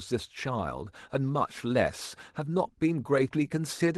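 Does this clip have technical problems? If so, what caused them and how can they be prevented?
No, this clip has no technical problems, so there is nothing to prevent.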